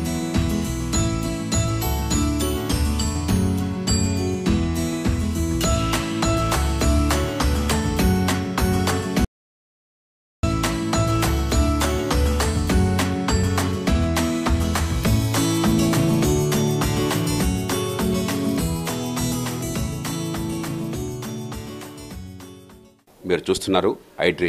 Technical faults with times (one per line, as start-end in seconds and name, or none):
9.25-10.43 audio dropout to silence